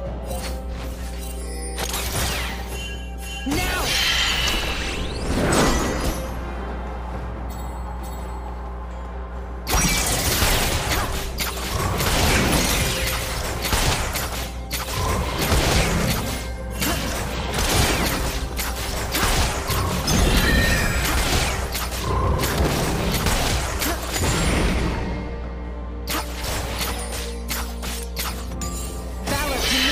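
Mains hum runs through the whole clip, from start to finish. Power-line current, likely leaking in through a ground loop or a nearby transformer, has coupled into the signal as a steady 60 Hz drone with low harmonics, sitting only a little below the sound itself.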